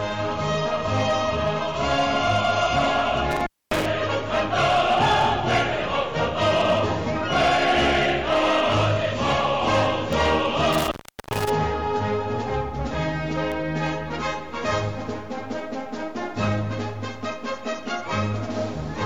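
At 3.31 s an intermittent contact kicks in: a loose plug or cable opens, the audio drops out for about 250 ms with crackle at the edges and faint hiss in the gap, then comes back by 3.86 s. Short bit error spikes follow at 5.22 s (about -27 dBFS) and 10.13 s (about -15 dBFS). Each is a single flipped bit in one sample, heard as a sharp, broadband tick unrelated to the material. The contact opens again from 10.73 to 11.50 s, this time for about 400 ms. A final two-sample bit error spike at 13.52 s ticks at about -21 dBFS.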